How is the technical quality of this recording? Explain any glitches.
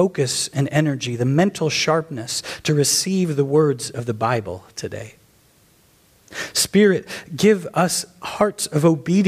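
No glitches or technical faults can be heard anywhere in the recording. The audio runs continuously without interruption, with nothing that stands out as a defect.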